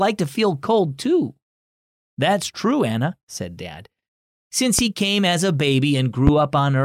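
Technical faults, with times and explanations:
4.79–4.82 s and 6.27–6.31 s, loud pop: each is a single sharp pop, around 15 dB above the speech, lasting roughly 35 ms, with the speech continuing underneath. The likely cause is a brief voltage spike, from a switch, a connector, static discharge or a driver glitch, added to the signal. The downstream circuitry shapes that pulse into a short burst that the ear hears as a percussive click or thump.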